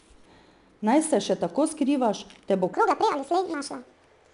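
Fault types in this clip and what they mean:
4-bit ADPCM compression: Every sample is coded as a small 4-bit step off a prediction, so a gritty hiss rides on the speech, clearly audible on louder parts, with nothing above 10.6 kHz, which fits a rate around 89 kbps.
Section at the wrong speed: From 2.73 s to the end, right after "tako skrivaš te bo", the speech runs 1.6 times too fast and jumps up around seven semitones, likely from that stretch being played against the wrong clock.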